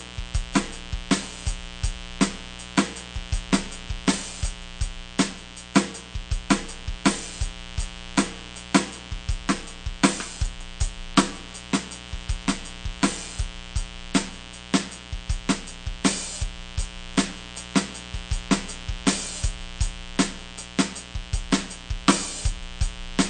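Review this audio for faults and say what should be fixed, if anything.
A mains buzz runs through the whole music clip, sitting around 15 dB below the music. It's built on 60 Hz: something like a dimmer, a rectifier or a missing shield is letting sharp switching spikes into the signal twice every mains cycle, so you get a stack of 60 Hz harmonics climbing well up the spectrum, which is what gives it that steady, raspy edge. Next time, keep the signal path shielded and away from dimmers and switching supplies.

The second problem is also there from start to finish. Nothing comes through above 9.1 kHz, and the mix has a watery, swirly quality where weaker detail keeps flickering in and out. That's plainly audible damage, likely from MP3 compression at a low bitrate, and it fits something around 48 kbps. When the encoder runs short of bits, it drops the quieter frequency lines frame by frame and cuts the treble off at a fixed point. 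Encode from the original at a much higher bitrate, or keep a lossless copy.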